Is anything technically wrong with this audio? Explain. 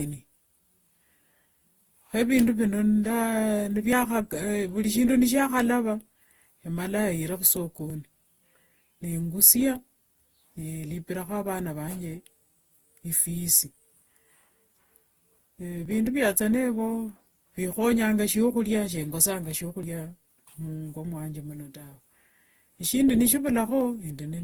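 Yes, there are two faults.

Throughout, the speech sounds swirly, smeared and hollow, and consonant attacks blur. This is likely generation loss. The audio was probably encoded and decoded about seven times, which fits Opus at 48 kbit/s. Each pass quantised again on a shifted frame grid. The noise piled up.

At 3.93, 7.90, 15.86, 19.83 and 23.81 s, the speech skips abruptly. Each skip drops about 20 ms, and the two sides are butted together. This is likely audio missing between chunks. The spacing points to 4-second chunks losing a sliver at each handover.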